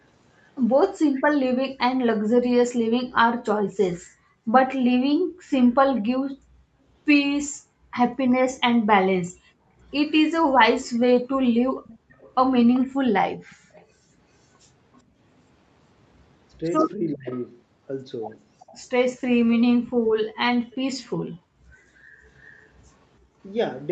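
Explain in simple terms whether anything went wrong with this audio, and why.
A few things go wrong, all tied to the call's echo handling.

Speech suppressed in double talk: at 0.99 s the voice drops out for a split second, and from 16.59 to 17.27 s it dips in bits. This is likely because both sides were talking at once, and the echo canceller turned everything down to be safe.

Echo leak: a faint copy of the voice comes back about 388 ms late, briefly at 1.15 to 1.22 s, then for longer stretches from 8.57 to 13.86 s and 17.29 to 22.7 s. Likely the far end was on a loudspeaker and its canceller didn't catch it all.

Background gated by the echo canceller: between 4.01 and 15.18 s, and again from 19.96 to 23.36 s, the room sound keeps ducking sharply and coming back. That's the canceller clamping the microphone down while the loudspeaker plays, adding up to about 3 s and 1 s of dips.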